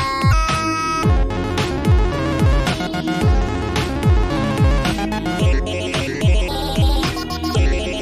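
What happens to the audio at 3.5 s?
Nothing goes wrong at 3.5 s; the audio passes through that moment intact, with no dropout, click or other fault.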